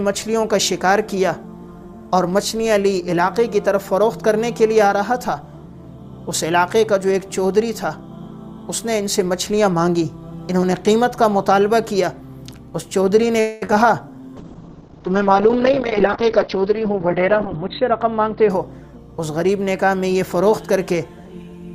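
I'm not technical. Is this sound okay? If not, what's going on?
No. Around 13.40 to 13.63 s the sound stalls for about a fifth of a second. This is likely a call audio freeze: network packets were held up, so the receiver stretched the last sound into a fading buzz or hiss until the rest arrived, then carried on where it stopped.

Right after, at 13.65 to 13.67 s, 13.67 to 13.70 s and 13.72 s, comes short concealed packet loss. Tiny pieces never arrived in time, so the receiver patched each hole by continuing the previous sound and blending back. You hear brief smears or wobbles, and a very short sound can drop out.

From 14.37 to 19.56 s there is a call bitrate drop. The connection's estimated capacity fell, so the sound was squeezed into far less data. The top end is cut from 20 kHz to 4 kHz, leaving it muffled and rougher. The low quality holds for about 3.4 seconds of that stretch.

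From 15.76 to 18.36 s, a jitter buffer speed-up overlaps that drop. Too much audio had piled up waiting to play, so the receiver cut out many tiny slices, about a fifth of a second in total. The sound runs at 108% speed without changing pitch, which comes across as hurried.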